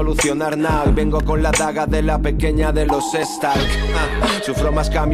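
Overlap between stream segments is audible in this audio at 1.23 to 1.25 s and again at 3.23 s, each time as a tiny skip forward. The two events fall about 2 s apart, matching 2-second stream segments whose timestamps overlap at the boundaries. The player discards the overlapping span, roughly 20 ms at the first joint and slightly less at the second, though that sound was never actually duplicated, so the waveform jumps abruptly.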